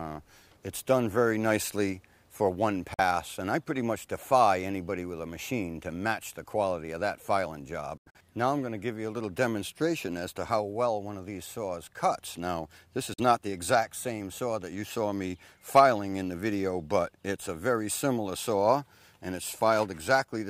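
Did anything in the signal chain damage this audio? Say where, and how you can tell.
Yes, at playback: blank full-band stripes at 2.94–3.00, 7.97–8.16 and 13.14–13.20 s, audio resuming as if it had played on; likely a Bluetooth dropout discarding late packets.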